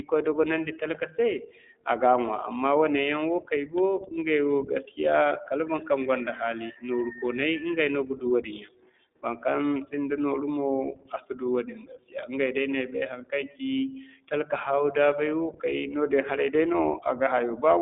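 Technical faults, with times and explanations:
Throughout, iLBC codec. The speech sits in a telephone band of about 250 Hz to 3.6 kHz, with nothing above 3.8 kHz. Each frame's excitation is coded independently, leaving a plainly rough, synthetic edge. This fits 20 ms frames at 15.2 kbps.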